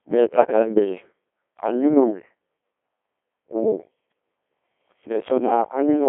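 Speech runs through a Codec 2 vocoder for its whole length, with heavy damage. The decoder rebuilds the voice from sine waves driven only by pitch, voicing, energy and a coarse spectral envelope, so the original waveform is gone and the result sounds robotic and buzzy. The coarseness fits a very low rate of around 1.2 kbit/s. The sound sits in a 300 to 3400 Hz line band, with nothing above 3.6 kHz.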